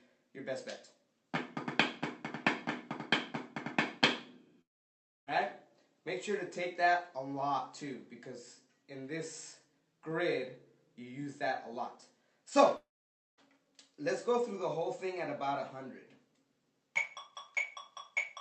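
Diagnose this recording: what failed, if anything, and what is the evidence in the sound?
Two long network dropouts, at 4.61 to 5.29 s and at 12.77 to 13.40 s, each removing roughly 0.6 to 0.7 s of audio. The likely stage is the network: the last sound smears into a short fading buzz, falls to near silence for most of the gap, then resumes further along with the missing stretch gone. A driver or buffer underrun would give brief, repeated clicks instead. The high end stops around 8 kHz, consistent with the call codec.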